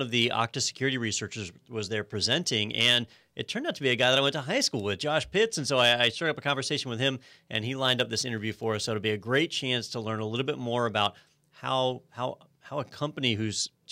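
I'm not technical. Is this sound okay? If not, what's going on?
No. Sample clock jitter from 7.64 to 9.32 s, between "conversation with him and" and "chance to learn a": the recording's timing clock wobbled by about a couple of millionths of a second, so the speech picks up a rough hiss that's strongest on loud, bright sounds.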